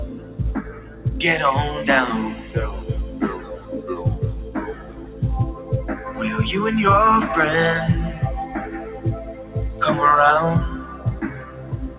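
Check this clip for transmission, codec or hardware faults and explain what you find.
The clear fault is a speech noise suppressor acting on non-speech sound. It is heard through a call path that carries nothing above 4 kHz, which fits G.711 mu-law at 64 kbps.

Noise suppressor applied to music or sounds, throughout: tuned for speech, it mistakes steady tones and decaying tails for noise, so the level pumps and thins, swinging by about 15 dB.

Sound cut by the noise suppressor, at 0.08–1.06, 2.35–2.55, 3.08–3.89, 4.44–5.22, 5.54–6.11, 8.66–9.56 and 10.77 s to the end: held sound sinks by about 7 to 9 dB at worst, while attacks mostly get through.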